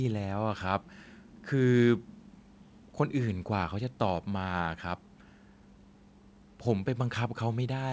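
Speech over a wideband call path, nothing amiss: the bass roll-off from the microphone processing and the band edge at 8 kHz are just what the call chain and codec normally impose.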